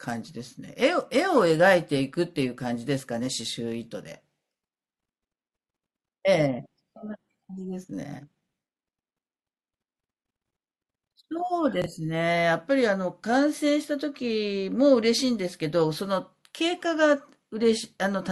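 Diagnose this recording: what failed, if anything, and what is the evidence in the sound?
Chunks out of order in the driver or buffer: at 11.82–11.86 s a 21 ms block plays one slot late, leaving three hard joins, seen as waveform steps and vertical spectrogram lines.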